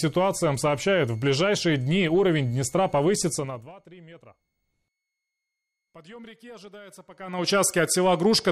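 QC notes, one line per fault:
Throughout, switching supply whistle: a thin, steady high whistle sits under the whole sound, a little above 2 kHz, wandering between about 2.15 and 2.22 kHz, roughly 40 dB below the signal. A power supply cycling in an audible burst mode produces this. On a spectrogram it is a faint horizontal line that wobbles slightly in pitch. On the waveform it is too low to see.
3.32–3.74 s and 7.10–7.52 s, zipper noise: the level falls by about 25 dB in the first span and rises by about 25 dB in the second. Each move is made in 3 dB jumps, roughly 20 per second, with no smoothing. Every jump puts a small discontinuity into the signal, so a rapid ticking or zipping rides on the sound while the level moves. The waveform envelope shows a staircase rather than a ramp, and the spectrogram shows a row of thin vertical broadband lines at each step.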